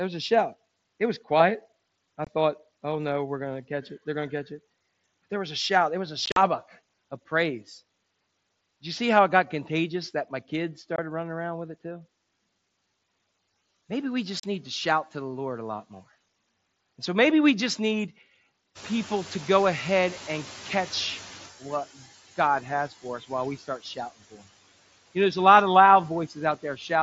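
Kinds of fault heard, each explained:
Noise suppressor artifacts: Throughout the clip the background noise pumps, sinking by about 16 dB in the gaps between phrases and rising back up underneath the speech, so the floor breathes in step with the talking. A noise suppressor causes this. Frame by frame, it turns down each frequency band it judges to be steady noise, but it has to hold back whenever speech fills those same bands, so the noise comes through with the speech.
Unconcealed Bluetooth headset packet loss: The speech has abrupt holes with hard edges: short dropouts at 2.25 to 2.27 s, 10.96 to 10.99 s and 14.40 to 14.44 s, and a rougher, chopped patch from 6.26 to 6.37 s. That patch loses about 75 ms in pieces, the longest about 45 ms. The audio frames carrying the speech from headset to phone went missing on the mSBC link and nothing filled them in. The gap lengths fit runs of 7.5 ms frames.
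Noise suppressor catching up: From 18.75 s the background noise suddenly becomes noticeably louder. At first it is reduced by only about 10 dB, then it sinks gradually until about 21.51 s. The room noise rose by about 16 dB near 19 s, and the suppressor's estimate of the noise lagged behind that jump. It took roughly 2.8 seconds to relearn the new noise level and apply its full reduction again.
Speech cut by the noise suppressor: Between 26.63 and 26.9 s, parts of the speech sound swallowed and faint, dipping by up to about 9 dB over roughly a tenth of a second in total. The noise suppressor mistook these quieter speech sounds for background noise and turned them down along with it. Low-level detail near the end of the clip loses its presence as a result.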